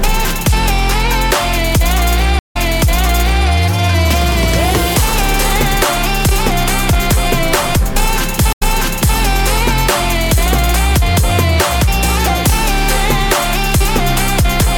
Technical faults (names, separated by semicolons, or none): stream reconnect